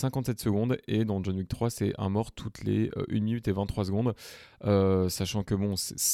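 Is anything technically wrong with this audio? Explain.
No, there is nothing technically wrong with it.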